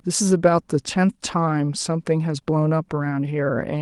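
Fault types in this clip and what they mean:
No fault types are present in this clip.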